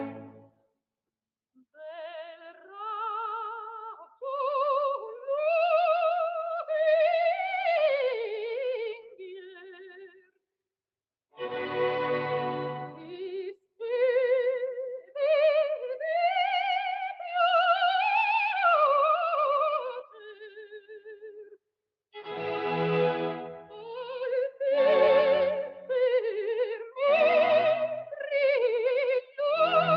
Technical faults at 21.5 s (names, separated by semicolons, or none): sound cut by the noise suppressor